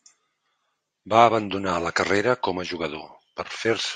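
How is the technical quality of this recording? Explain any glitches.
No glitches can be heard anywhere in the recording.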